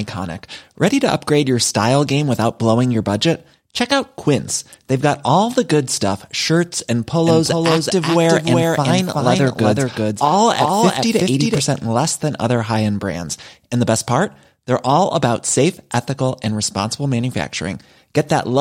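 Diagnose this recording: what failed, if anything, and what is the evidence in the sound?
A second, slower capture path likely entered the mix: a doubled audio track, 7.27–11.61 s, with a dry copy about 5 dB quieter trailing about 0.4 s, abruptly starting and stopping.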